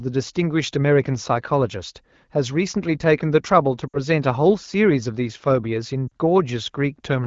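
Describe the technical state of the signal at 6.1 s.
At 6.1 s the speech briefly drops toward near silence for about 40 ms, from 6.08 to 6.12 s, before recovering weak or rough for a moment. These are lost AMR speech frames: the wideband decoder repeated its last good settings with falling gain, fitting two dropped 20 ms frames.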